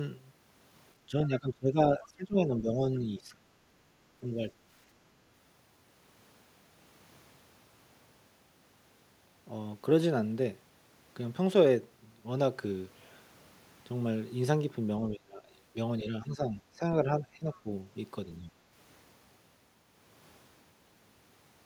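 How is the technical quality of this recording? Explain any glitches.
The recording has two clear problems, both tied to moments when both sides of the call were talking.

The first is speech suppressed in double talk. The speech dips sharply at 1.08–1.78 s, 1.97–2.80 s, 3.01–3.45 s, 15.10–15.57 s, 16.03–16.82 s and 17.04–17.69 s. The early drops are deep, around 20 to 25 dB. The last two are milder, near 10 dB. The talker sounds pulled back or chopped in pieces. The likely cause is an echo canceller that could not tell this talker from the loudspeaker echo, so it turned everything down.

The second is the other side's voice leaking through, at 17.53–17.59 s. It is a brief scrap of a second voice, very faint, roughly 30 dB below the main speech. It lands inside the last suppressed stretch. The likely cause is loudspeaker sound reaching the microphone that the echo canceller did not fully remove.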